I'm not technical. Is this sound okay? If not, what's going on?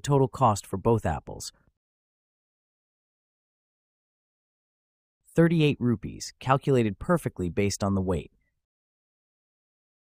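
Yes, it sounds fine; there's nothing wrong to hear.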